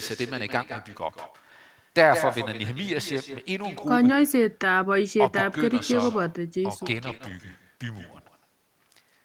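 A speech recording carries echo with no canceller from start to finish: every phrase is followed about 10 dB down by a thinner copy arriving roughly 150 ms later. That spacing matches a round trip through the network, with the far end playing the call over a loudspeaker and its microphone feeding the sound straight back, and nothing subtracting it before it returns. Near the end there is a cluster of packet faults. From 6.93 to 7.15 s the audio turns rougher and grainier without ever dropping out. This is a lost packet rebuilt from error correction: about 120 ms of missing audio, which fits six packets, was replaced by the low-bitrate redundant copies carried inside the packets that followed, so the decoder had something to play but at reduced quality. Immediately after, between 7.17 and 7.21 s, comes a brief smear where roughly 20 ms never arrived in time and no redundant copy existed. 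That is short concealed packet loss: the decoder extended the preceding sound to bridge the hole, about 18 ms of synthesized fill, then crossfaded back into real audio. The same rough, noisy quality returns from 7.21 to 7.31 s, a second lost packet rebuilt from error correction covering about 60 ms, consistent with three more packets recovered from forward error correction data.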